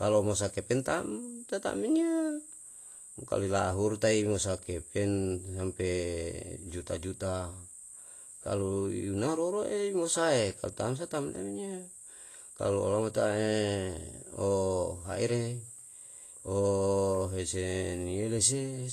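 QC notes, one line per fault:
Throughout, Vorbis compression: the speech has a hissy, grainy treble, smeared consonant attacks, and nothing above 14.2 kHz. The likely cause is low-quality Vorbis coding, which quantises the high-frequency detail so coarsely that it turns into noise. This fits a bitrate near 34 kbps.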